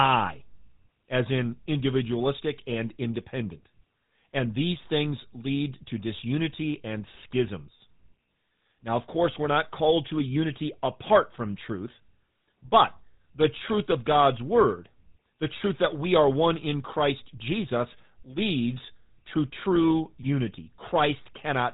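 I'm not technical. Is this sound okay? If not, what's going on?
No, not quite. The whole clip has gone through the GSM full-rate codec, the old mobile-phone system that rebuilds speech from a rough model of the mouth and throat. Nothing above 4 kHz survives, so voices come out thin, buzzy and gravelly all the way through.

There's also a short burst of GSM bit errors from 20.19 to 20.26 s, right after "leads to true". Some of the data arrived scrambled, like on a weak phone signal, so the decoder misread it and the sound briefly breaks into a squawky, gargling glitch.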